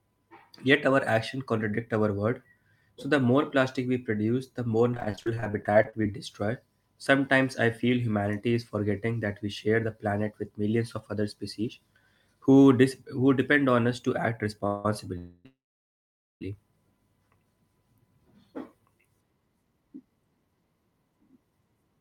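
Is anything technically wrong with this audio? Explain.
Yes. The speech has two kinds of network fault.

From 4.91 to 6.15 s, just after "we produce the more", there is repeated packet loss, which gives a robotic sound. Audio kept failing to arrive in time, leaving about two dozen short holes of up to 34 ms each. Each hole was patched by stretching the last sound, and about 30% of that stretch is patched material. The speech sounds choppy, with roughly a third of a second actually lost.

Three call audio freezes follow, each likely caused by delayed packets draining the jitter buffer. The first runs from 14.67 to 14.85 s. Then, after "on us to act", freezes run from 15.18 to 15.46 s and from 15.46 to 16.42 s. In each one, the last sound is held as a fading buzz or hiss. The final freeze drops to silence for about 0.84 s. When the audio resumes, it carries on where it stopped, so about 1.4 s of gap is inserted and no speech is lost.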